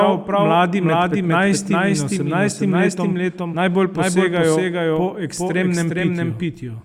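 A second capture path running slower than the first, or an edit that left two copies of the recording out of step, is the likely cause of the doubled audio track heard from start to finish. The same speech plays twice, the trailing copy arriving roughly 400 ms late at about the same loudness as the original. It carries the full frequency range with no decay or room colour, so each syllable returns as a clean, distinct repeat.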